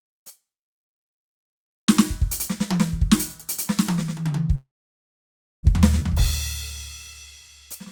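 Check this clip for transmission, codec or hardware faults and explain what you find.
Two transmission faults appear in this music clip, both around the 5-second mark.

From 4.55 to 5.65 s there is a call audio freeze. The sound thins into a fading tail, then about 0.97 s of silence. It likely comes from delayed packets draining the jitter buffer.

From 5.99 to 6.02 s playback will skip ahead. Roughly 0.7 s of music is dropped. The two sides are spliced almost directly, with a tiny filled gap.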